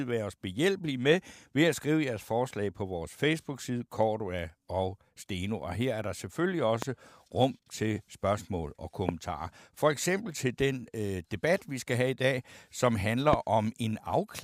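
At 6.82 to 6.85 s, just after "her er der selvfølgelig", a loud pop cracks over the speech, peaking roughly 20 dB above it. A second hits at 9.09 to 9.11 s after "rum til spørgsmål og", and a third at 13.33 to 13.35 s after "have i dag som". The speech continues underneath each pop. The likely cause is a sudden voltage pulse from a plug, switch, static or driver glitch entering the signal chain.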